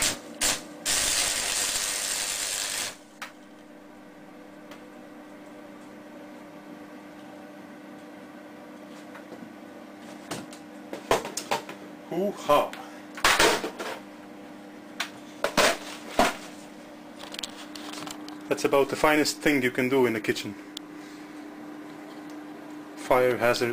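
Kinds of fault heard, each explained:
Nothing here stands out as a technical fault; the audio just runs along without any dropouts, glitches or distortion catching the ear.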